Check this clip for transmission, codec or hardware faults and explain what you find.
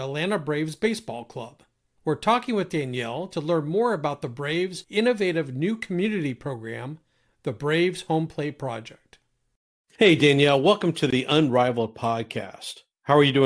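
Nothing stood out on listening to this speech recording.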